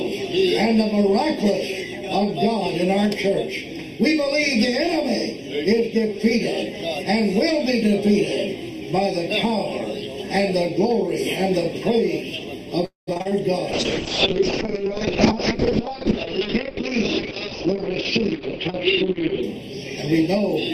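Throughout the clip the sound is hollow and phasey. That is channel delay, heard as comb filtering. One channel runs late by something under half a millisecond, and the two are summed to mono. Content shared by both channels cancels at evenly spaced frequencies. The first notch sits somewhere around 1.5 kHz, with more repeating above it. The result is a fixed, hollow coloration that never changes. At 12.85 s the audio stalls in a call audio freeze lasting until 13.09 s. The last sound is stretched into a fading buzz for about 220 ms. Roughly 140 ms of that drops to near silence. Then the sound resumes exactly where it stopped. Nothing is lost; a gap has simply been inserted. The likely cause is packets held up in transit until the jitter buffer ran dry. Right after, from 13.13 s to 13.33 s, repeated packet loss makes the sound choppy. Four short holes appear, the longest about 35 ms. Each is patched by extending the preceding sound, and the next hole follows almost immediately. 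About half of this stretch is patched rather than real, and roughly 100 ms of the original is missing. From 13.72 s to 19.49 s comes a call bitrate drop. The sound turns rough and watery. The top end is cut off near 6 kHz, where before it reached about 20 kHz. That pattern points to the encoder's rate falling from around 48 kbps to about 7 kbps. It held that floor for nearly six seconds before recovering.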